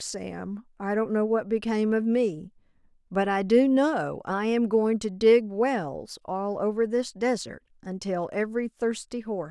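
Speech recording, with no technical faults audible anywhere in it.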